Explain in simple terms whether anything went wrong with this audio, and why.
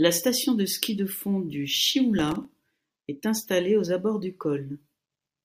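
Between 2.19 and 2.51 s, just after "ski de fond du" and before "est installée aux abords", the speech picks up a gritty, crackling texture, like tiny rapid clicks tearing through it. This is processor overload crackle. The computer handling the audio fell behind and repeatedly missed its deadlines for very short chunks, on the order of a millisecond or two each. About fifteen of those chunks dropped out as brief silences, and their hard edges add up to the crackle.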